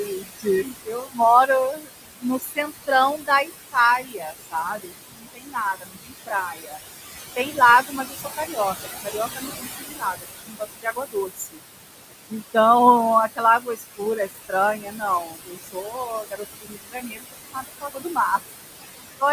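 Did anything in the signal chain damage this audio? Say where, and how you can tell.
Yes. Noise suppressor artifacts run through the whole clip, introduced at the call-processing stage. The room noise, which sits about 9 dB below the speech, is pulled down by about 18 dB whenever the suppressor classes a band as steady background, then lets through again under the speech. Because that decision is made frame by frame and band by band, the noise sinks between the words and rises under them.

Speech cut by the noise suppressor appears in three spans: 0.06 to 6.78 s, 7.36 to 11.6 s, and 13.36 to 18.4 s. The same call-processing stage misjudged quieter parts of the speech as noise and attenuated them along with the background, by about 22 dB at worst in the first span and about 21 dB in the other two. Roughly three, two and three seconds of speech are affected respectively, heard as faint or swallowed consonants and word endings.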